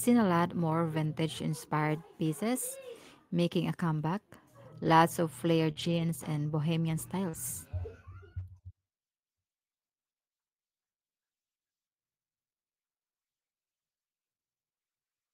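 Speech, with two kinds of packet fault. Lost packets rebuilt from error correction sound briefly rougher and noisier, with no gap. Single 20 ms patches fall at 1.03 s, just after "seen a lot more", at 4.85 s, at 7.33 s, after "and bohemian", and at 8.39 s. A longer 140 ms stretch runs from 5.76 to 6.02 s, between "of flared" and "and bohemian". In each case the following packet carried a low-bitrate copy that the decoder played instead. Short concealed packet loss occurs twice, from 5.71 to 5.78 s and from 7.30 to 7.35 s. Each hole is about 40 ms. The decoder extended the preceding sound to cover it, then blended back, leaving a brief smear.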